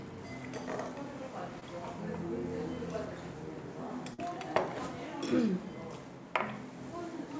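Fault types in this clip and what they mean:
short concealed packet loss: At 1.6 s, 20 ms of sound never arrived. The receiver extended the preceding sound, leaving a brief smear before blending back.
burst of packet loss: From 4.14 to 4.2 s, a run of packets was lost. The last sound is held and fades, then resumes with 40 ms gone.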